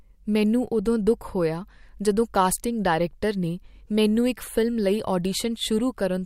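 Speech, with nothing technically wrong to be heard.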